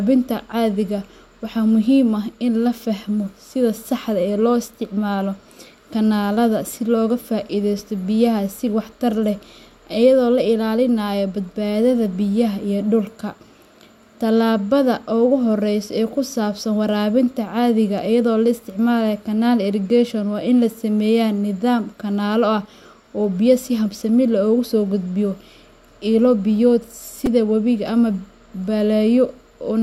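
Speech with two repeated-buffer faults. At 7.79 s a tiny piece of about 2.7 ms plays twice, giving a brief click. At 27.26 s it repeats four extra times, a short buzz. New audio arrived late, and the device replayed its last buffer, which fits a 128-sample buffer.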